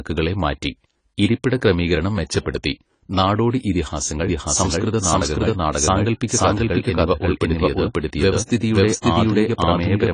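Speech recording with plainly audible AAC compression damage throughout: nothing above 10 kHz, leaving a dull, smeared sound that fits AAC-LC at a low bitrate around 24 kbps, the likely cause. From 4.27 s, right after "ക്രമീകരണം മെച്ചപ്പെടുത്തി നാടോടി ഇതിഹാസങ്ങൾ", to the end, a doubled audio track enters abruptly: a dry, full-band copy at roughly equal level trailing by about half a second, likely from a second, slower capture path or an out-of-step edit.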